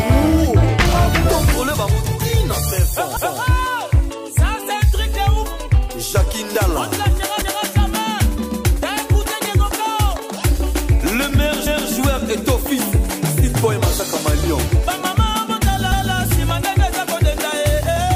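The audio has an overlapping chunks problem: a quarter-second stretch plays twice at 3.17, 7.42, 11.67 and 15.92 s, heard as a click or stutter each time. It was processed in 4-second chunks, each starting 250 ms before the previous one ended.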